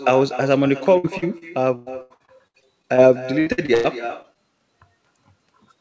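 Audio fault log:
throughout, echo with no canceller: A quieter, thinner copy trails every phrase by about a fifth of a second, sitting about 14 dB below the speech. The far end's loudspeaker leaks into its microphone and nothing removes it, so the speech returns after the network round trip.
0.98–3.00 s and 3.40–3.86 s, repeated packet loss (robotic sound): The speech turns choppy, with pieces audibly missing. A rapid run of gaps, the longest about 100 ms, left roughly half a second unheard in the first stretch and about half of the second. Each gap was patched by extending the last sound, and the next followed soon after.
4.22–4.25 s and 4.33–4.37 s, short concealed packet loss: Two brief smears or wobbles in close succession, each where about 20 ms of audio failed to arrive in time. The receiver bridged each hole by continuing the preceding sound, from its pitch when voiced or as shaped noise when not, then blended back into the real signal.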